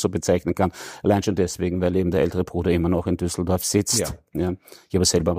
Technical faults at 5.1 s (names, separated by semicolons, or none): none